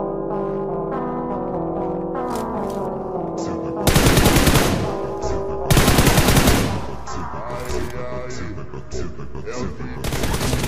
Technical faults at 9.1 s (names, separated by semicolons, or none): none